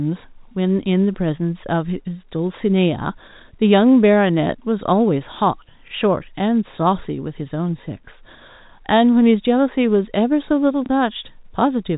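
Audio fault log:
5.88–5.91 s and 10.86–10.89 s, packet loss with last packet repeated: at each point a 30 ms piece of the speech went missing and the receiver filled the gap by playing the previous chunk again, which points to a single lost 30 ms packet. Each single repeat comes out as a small blip over the faint narrowband telephone quality of the G.711 path.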